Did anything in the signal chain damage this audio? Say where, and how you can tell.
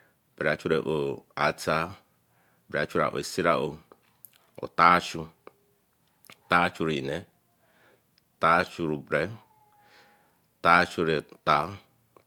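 No, nothing in the signal chain damaged this audio.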